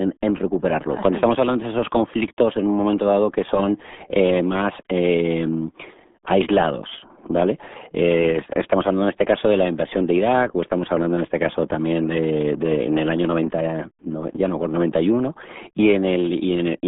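Throughout, the speech carries heavy RealAudio 14.4 codec damage, consistent with a roughly 8 kbit/s dial-up speech coder. Energy sits between 200 Hz and 3.6 kHz, with nothing above 3.8 kHz, so the speech sounds muffled and gargly, with coarse, smeared articulation.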